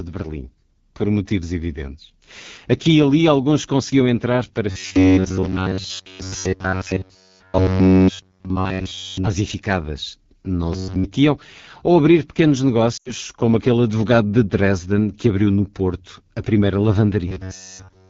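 The whole clip carries the sound of the AMR wideband (HD Voice) codec at a low rate. The speech has a plainly rough, raspy texture, which fits AMR-WB running at about 8.85 kbit/s, one of its two lowest modes. The codec models speech up to 6.4 kHz with a pulse-excited vocal tract filter and fills 6.4 to 7 kHz with shaped noise. At this rate the excitation is coded too coarsely, so voiced sounds come out grainy.

From 4.70 to 9.27 s the speech turns into a rigid, metallic buzz at 93.8 Hz. It still loosely tracks the speech underneath, and all of that stretch is affected. The likely cause is robotic sound from repeated short buffers: audio arrives too seldom, and playback loops the most recent fragment while the real signal is skipped. A fixed 93.8 Hz pitch points to a repeated block about 10.7 ms long. The same buzz returns briefly from 10.73 to 11.06 s, where most of the audio is affected. 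It appears again from 17.28 s to the end of the clip, where all of it is affected.

At 12.97 to 13.12 s there are lost AMR speech frames. The gap is about 80 ms, which fits four consecutive 20 ms frames failing their checks. The decoder carries forward the last good pitch and filter settings at falling gain. The speech drops to near silence within two frames, as expected for wideband. It comes back thin and rough for a moment.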